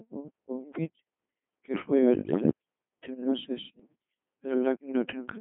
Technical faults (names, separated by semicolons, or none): Codec 2 vocoder; bit errors on digital voice radio